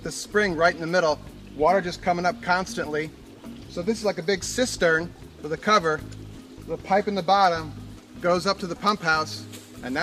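No technical faults can be heard anywhere in the signal.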